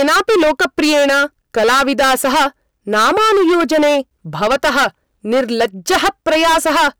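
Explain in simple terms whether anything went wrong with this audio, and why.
Hard clipping runs through the whole clip, from start to finish. The speech was pushed far louder than the recording chain could handle, so the tops of the sound waves were sliced off flat, and nearly a third of the signal hits that ceiling. Those flat edges create harsh extra tones high up, which is why every loud moment sounds fuzzy and gritty rather than clean.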